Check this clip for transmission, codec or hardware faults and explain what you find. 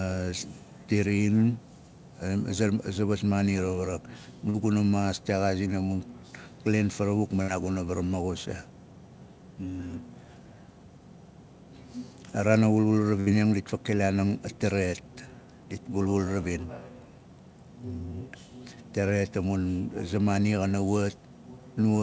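Three packet-loss events show up, all transmission faults, in audio carried over a call path whose content stops at 8 kHz, which fits a wideband codec such as G.722.

Short concealed packet loss, 4.50 to 4.56 s: about 40 ms of audio arrived too late, so the receiver extrapolated the preceding sound for 42 ms, heard as a brief smear.

Burst of packet loss, 7.42 to 7.50 s and 13.20 to 13.28 s: roughly 60 ms went missing each time. Concealment stretched and faded the last sound for 59 and 65 ms, leaving a held, dying buzz or hiss before the speech resumes, skipping what was lost.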